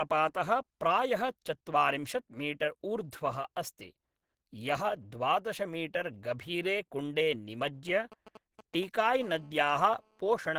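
The whole speech clip carries a smeared, band-limited low-bitrate quality that the MP3 container can't hide. It's likely low-bitrate audio saved at a high bitrate, consistent with a 16 kbit/s Opus encode later re-saved around 192 kbit/s. From 7.88 to 9.23 s, GSM signalling bursts come in as a galloping dit-dit-dit of short 217 Hz buzzes, roughly 20 dB under the speech. A nearby 2G phone is pinging the network, and the audio circuitry is rectifying its radio pulses. From 9.23 to 10.54 s it turns into steady GSM phone buzz, a hard, raspy 217 Hz drone about 30 dB down. That's the phone transmitting in bursts 217 times a second during a call.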